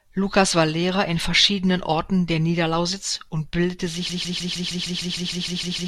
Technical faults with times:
4.10-5.87 broken-record loop

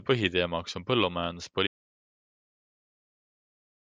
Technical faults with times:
1.67-3.92 audio dropout to silence

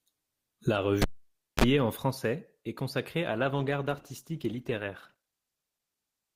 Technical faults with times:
1.02-1.64 cable pulled and plugged in
3.30-6.35 adaptive stream at a lower bitrate

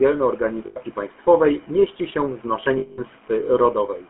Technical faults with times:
0.00-4.09 GSM full-rate codec
0.66-0.77 lost GSM frames
2.78-3.01 lost GSM frames

